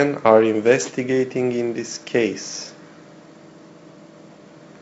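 The speech has no technical faults. It comes through G.722 wideband telephone coding, with nothing above about 7.7 kHz and a faint hiss in the upper band, and the slightly noisier lower band fits the 56 kbit/s mode.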